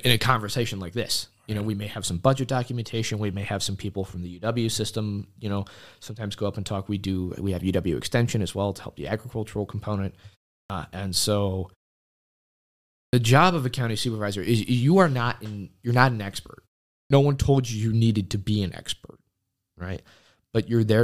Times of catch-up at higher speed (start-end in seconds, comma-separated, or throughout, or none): none